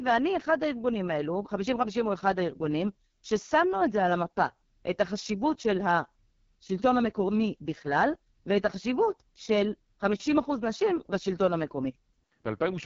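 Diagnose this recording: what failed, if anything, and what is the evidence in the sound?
The failure is at the codec stage. The speech has passed through the AMR wideband (HD Voice) codec at a very low rate. Across the whole clip it sounds rough and raspy, with heavy coding damage. Nothing is present above 7.2 kHz. The top band sounds like shaped hiss rather than real detail, because the codec models speech only up to 6.4 kHz and fills the rest with noise. This harshness fits the lowest 6.6 kbit/s mode.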